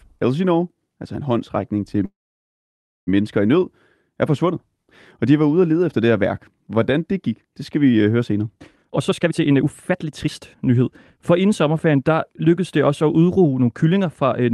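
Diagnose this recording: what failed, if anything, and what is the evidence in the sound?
Call audio freeze at the network and jitter-buffer stage, from 2.05 s to 3.09 s. Right after "altså en håndsrækning til" the sound stalls for about 1.02 s, of which about 0.94 s is silent, and then resumes cleanly on "mennesker i" with nothing lost. The likely cause is packets held up in transit: the buffer ran dry, the receiver briefly stretched the last sound, then fell silent. A spectrogram shows a short smear followed by a blank column; the waveform flattens.

Jitter buffer speed-up, also in call processing, appears twice. From 8.76 s to 10.82 s, just after "høre senere", the speech runs at about 139% speed with roughly 0.7 s trimmed away. From 11.31 s to 14.25 s a milder 107% removes roughly 0.2 s. Pitch stays put while syllables hurry, because the buffer is cutting whole pitch periods to shed excess delay. 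On a spectrogram the harmonics hold their frequencies but events crowd closer together, and the waveform shows small splices.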